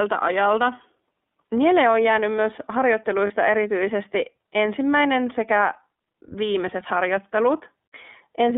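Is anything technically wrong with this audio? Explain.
Yes, two things. The whole clip has gone through the iLBC codec. The band runs from about 250 Hz to 3.5 kHz, and each 30 ms frame is coded on its own, which fits iLBC's 13.33 kbps mode. The speech comes out clear but noticeably rough and a bit synthetic.

There's also a lost iLBC frame from 3.27 to 3.31 s, which fits one dropped 30 ms frame. The decoder covers the gap by repeating the last pitch cycle mixed with noise, so you hear a brief buzzy, held vowel. The voice snaps back right afterwards.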